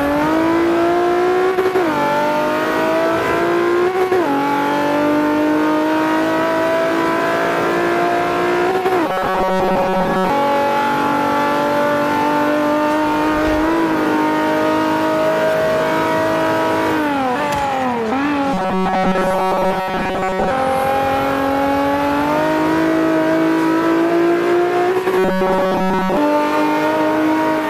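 From 9.08 to 10.30 s, 18.54 to 20.51 s and 25.18 to 26.17 s, robotic sound from repeated short buffers: a rigid 188 Hz buzz that follows the original only roughly, likely from a roughly 5 ms chunk replayed over most of the audio.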